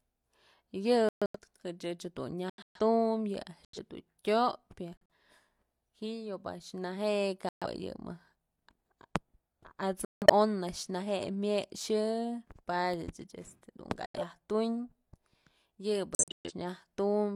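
Abrupt silent holes cut into the speech at 1.09–1.39, 2.50–2.80, 3.65–3.78, 4.96–5.14, 7.49–7.66, 10.05–10.30, 14.06–14.20 and 16.15–16.51 s, each 0.13 to 0.37 s long with timing intact: corrupt frame muted, where the decoder rejected damaged compressed frames and the player substituted silence.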